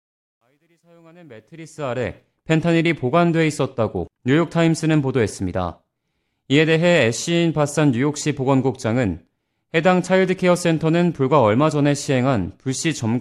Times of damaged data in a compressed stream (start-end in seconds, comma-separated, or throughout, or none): none